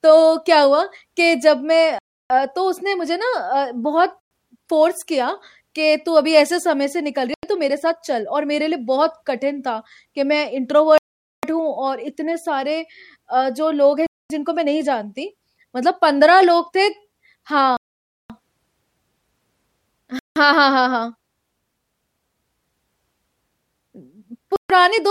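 Speech with eight Bluetooth stall dropouts, silences of 0.09 to 0.53 s at 1.99, 4.20, 7.34, 10.98, 14.06, 17.77, 20.19 and 24.56 s, likely caused by interference delaying packets until the headphone buffer emptied.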